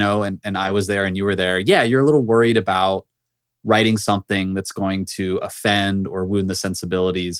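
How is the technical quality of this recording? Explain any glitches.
The recording has one brief glitch, a lost packet rebuilt from error correction, between 0.63 and 0.69 s, right after "and and" and before "was there and you". Packets went missing, but each following packet carried a low-bitrate backup copy that the decoder played instead, so there is no silence. The sound turns coarser and noisier for roughly 40 ms, which fits two lost packets. On a waveform there's no dropout, just a ragged stretch. A spectrogram shows a short, grainier, smeared patch.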